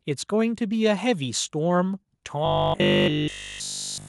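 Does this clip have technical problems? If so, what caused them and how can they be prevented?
Yes. From 2.46 s to 4.08 s there is robotic sound from repeated short buffers. The likely cause is that fresh audio reached the playback software too seldom, so it kept looping the last chunk it held while the real audio was skipped. A buzz at 50 Hz points to a 20 ms chunk repeating. For essentially that entire stretch, the speech becomes a rigid, metallic drone, only loosely following the words. A larger jitter buffer and enough processing headroom would keep new audio arriving before the previous chunk runs out.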